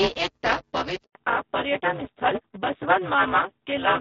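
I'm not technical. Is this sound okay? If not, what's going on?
No. Throughout the recording there is buffer tearing: a steady robotic buzz at about 188 Hz, present whenever speech is. The playback software and the sound hardware have fallen out of step, so about a third of each short chunk replays audio from roughly 10 ms earlier, which fits a 256-sample buffer.

At 1.03 s a handover gap cuts the voice out for 120 ms, until 1.15 s. The phone was switching networks, and no speech got through during the switch, so whatever was said then is gone.

From 1.15 s to the end, there is a fallback to narrowband. The call dropped from HD Voice to an older phone codec that removes everything above 4 kHz. The voice sounds duller and less crisp than in the first second.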